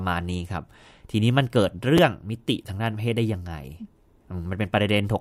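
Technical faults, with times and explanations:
1.97 s, chunks out of order: a block of about 5.3 ms arrives late and plays after the material that should follow it, a displacement consistent with roughly two blocks. Nothing is lost, but three hard joins produce a brief jumbled moment within the speech.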